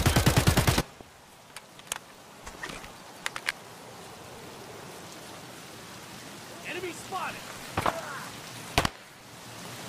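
At 0.79 to 0.82 s there is a short glitch. This is damaged data in a compressed stream. Some bytes in the encoded audio were wrong, so the decoder lost sync. It skipped ahead to the next frame header it could find. The same kind of blip returns at 3.49 to 3.51 s. Each one lasts only about 22 to 24 ms.

From 4.64 to 5.14 s a gritty burst of crackle rides on the sound. This is processor overload crackle. The processor could not fill its small audio buffers in time, which fits buffers of about 10 ms. Several deadlines in a row were missed, about seven. Each missed buffer was skipped, not held. That leaves tiny hard-edged gaps that blur into a tearing texture. It stops once the load eases.

A third glitch from damaged compressed data follows at 5.55 to 5.57 s.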